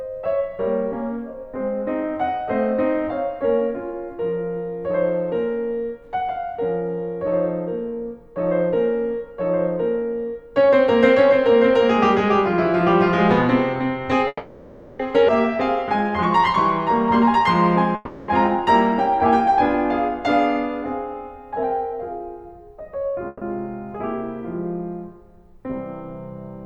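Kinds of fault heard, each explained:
call audio freeze: at 14.27 s, 17.95 s and 23.27 s the music stalls into a fading buzz for 0.72 s, 0.33 s and 0.14 s, the first ending in brief silence, then resumes where it stopped; likely delayed packets emptied the jitter buffer.
skip ahead: at 15.27 s the music jumps forward almost seamlessly, with roughly half a second missing and the two sides butted together; audio was dropped while later packets were already waiting, undoing most of the delay the first freeze added.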